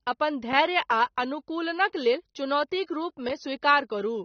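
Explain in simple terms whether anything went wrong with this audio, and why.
The whole recording sounds dull and smeared, with nothing above about 6.3 kHz, most likely from heavy AAC compression squeezing the speech into too little data. At 2.86 s there's a quick pre-echo, a short hiss that creeps in for about 24 ms just before a sharp sound, blurring its start.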